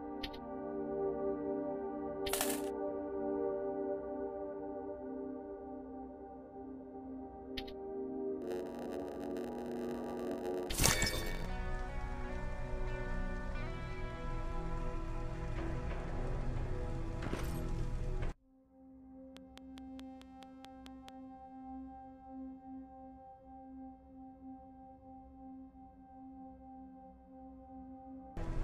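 From 8.41 to 11.46 s, a block size mismatch (padded) occurs: one stage hands over shorter blocks than the next expects, and the shortfall is filled with silence. The resulting gaps produce a 91.9 Hz buzz, and the audio runs at 0.919 times normal speed with its timbre essentially unchanged.

Between 19.37 and 21.10 s, a train of clicks appears, likely from interference or a faulty connection. About ten near-identical clicks arrive at a steady 4.65 per second, each peaking around 10 dB above the sound, and they tick through both sound and pauses.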